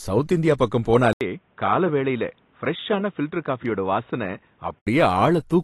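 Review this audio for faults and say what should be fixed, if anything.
AAC compression, throughout the clip: nothing is heard above 12 kHz, and the codec damage is plainly audible, giving the speech a dull, smeared quality. This is likely AAC-LC coding at a low rate, around 37 kbps. The encoder quantises its frequency lines against a hearing model and, short of bits, drops the top band and treats the remaining detail coarsely, so fine texture in the speech is lost. To prevent it, export at a higher bitrate or in a lossless format.

Input switched to a poorer device, from 1.13 s to 4.87 s: the audio narrows abruptly, with nothing above 3.8 kHz, and turns dull and boxy. The level drops by about 5 dB, a new background noise appears at about 40 dB below the speech, and there is an 80 ms silence at the switch. The sound clears again at 4.87 s. The likely cause is the system handing the input to another microphone or a headset's call profile, which passes a narrower band and has its own tone and noise. 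To prevent it, lock the recording input to one device for the whole session.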